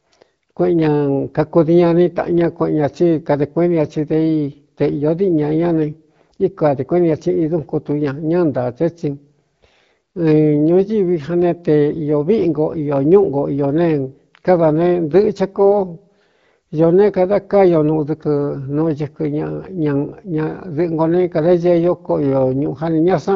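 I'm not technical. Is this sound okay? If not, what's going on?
Yes, it's fine: this is speech that sounds just like an ordinary HD Voice phone call, with nothing wrong to worry about.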